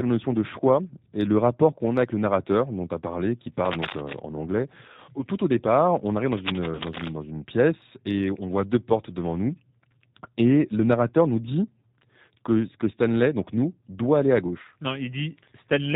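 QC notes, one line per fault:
Throughout, G.729 codec: the speech is rebuilt at 8 kbit/s from a vocal tract filter, a pitch predictor and a few pulses per frame. Nothing above 4 kHz survives, so it sounds band-limited, rough and synthetic, and the codec damage is plainly audible.
3.65–4.20 s and 6.32–7.14 s, cable scratch noise: dense, uneven bursts of scratching and rustling ride over the speech only a few dB below it. The likely cause is a worn cable or connector being moved, with its contact resistance changing rapidly.
6.75–6.82 s and 14.63–14.66 s, VoIP packet loss concealed by the speech codec: about 40 ms and then 20 ms of audio go missing, which fits two lost packets and then one. The decoder stretches its last pitch and filter into a fading buzzy tone or coloured noise. Because each frame builds on the previous one, the speech stays weak and distorted briefly after the gap.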